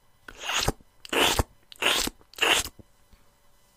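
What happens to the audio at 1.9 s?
Nothing goes wrong at 1.9 s; the audio is intact there, with no dropout, click, distortion or other fault at that moment.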